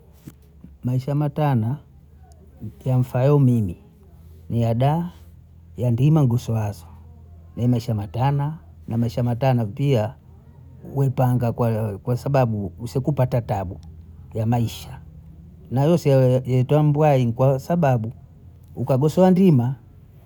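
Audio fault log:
No faults can be heard anywhere in the speech.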